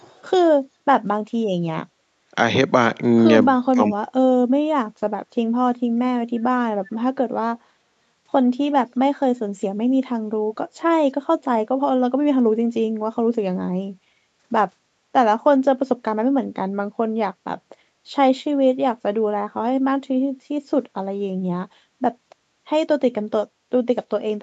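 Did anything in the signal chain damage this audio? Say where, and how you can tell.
Yes, in the call-processing stage, at two points.

From 0.00 to 0.23 s there is an echo leak: a faint copy of the sound trails the original by 325 ms, sitting very low, roughly 35 dB under the direct speech. The likely cause is a far-end echo canceller letting part of its loudspeaker pickup back into the call. Room reverberation would smear into a smooth decay. This is a discrete repeat at one fixed delay, which points to an echo path rather than the acoustics.

Between 3.72 and 3.96 s the speech is suppressed in double talk. The level drops sharply, by something like 25 dB at its deepest, in pieces adding up to around 150 ms while the other side is talking. The likely mechanism is the echo canceller failing to separate its own talker from the returning echo and turning both down. Packet loss would leave a gap filled with smeared or repeated concealment sound. 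Here the speech is simply ducked in level, the way a suppressor gain would act. The 8 kHz top end comes from the Opus call path and the microphone processing, and it is not part of either fault.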